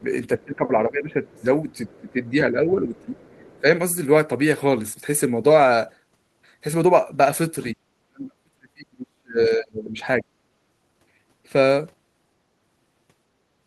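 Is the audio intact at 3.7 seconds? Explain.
No. Just before 3.7 s, from 2.96 to 3.61 s, a faint second voice sits underneath the talker, far below the main speech, with roughly 30 dB separating the two. This is the other side's voice leaking through: the far end is played on the talker's loudspeaker, picked up again by the microphone, and the echo canceller has likely left a residue of it in the outgoing signal.

Right at the end of that stretch, from 3.60 to 3.67 s, the talker's own speech briefly drops by roughly 15 dB, a short dip of about 70 ms. This is speech suppressed in double talk. With both sides sounding at once, the echo canceller likely could not tell the talker apart from the loudspeaker echo and attenuated everything together, so the talker's level sags.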